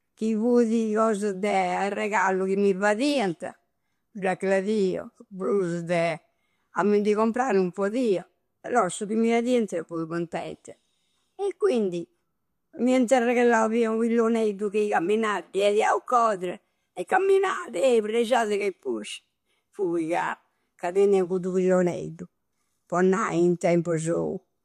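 Nothing goes wrong anywhere in this recording; there's simply no technical fault to point to at any moment.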